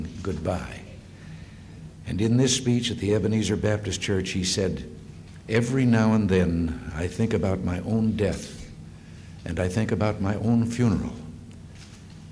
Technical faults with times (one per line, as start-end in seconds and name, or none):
none